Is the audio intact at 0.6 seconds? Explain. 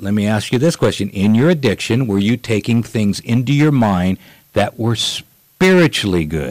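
No. Hard clipping runs through the whole speech clip, 0.6 s included: the signal is driven about 12 dB past what the stage can pass, so peaks are sliced flat on roughly 4% of samples. Those flattened tops add high harmonics, heard as harsh crackle and fuzz on louder syllables.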